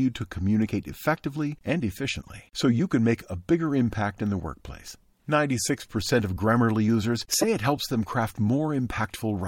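Corrupt frame decoded at 2.22 to 2.30 s, after "to communicate effectively and", and 7.41 to 7.44 s, before "it helps them craft": damaged compressed frames decoded anyway misplace energy, giving a faint, then a loud, chirp, squeak or blip.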